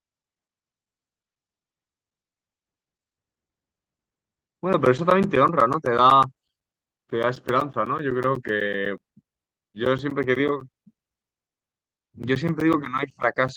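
From 0.10 s to the end, periodic USB or driver dropouts tick through the speech every 0.125 s, eight times a second. Each time a background task stalls the audio driver, a sliver of signal is replaced with silence. Unlike random network loss, the clicks are evenly spaced and fall silent during pauses.

At 4.93 to 4.99 s and again at 8.09 to 8.19 s, a lost packet rebuilt from error correction leaves no gap. The decoder plays a low-bitrate backup copy instead, so those stretches, about 40 and 60 ms long, turn briefly rough and noisy within the call's 12 kHz band.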